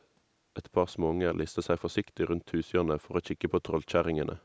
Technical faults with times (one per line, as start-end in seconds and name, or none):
0.00-0.04 echo leak